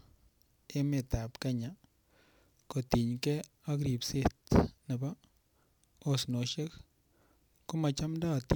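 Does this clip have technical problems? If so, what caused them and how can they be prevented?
Yes. From 0.77 to 6.44 s there is sample clock jitter: microsecond-scale timing errors misplace samples on steep waveform slopes, adding a gritty hiss about 30 dB down. On a spectrogram, high-frequency haze follows loud syllables and clears in pauses. A stable, low-jitter converter clock prevents it.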